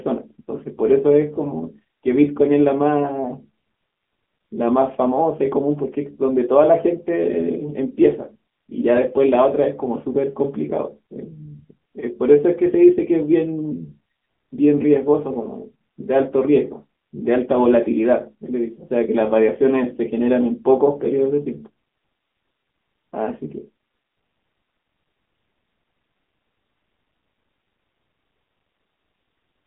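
Speech throughout carries AMR narrowband mobile codec damage: the band is cut to 200 Hz–3.5 kHz, nothing passes above 3.6 kHz, and the buzzy, synthetic texture fits AMR-NB at around 8 kbps.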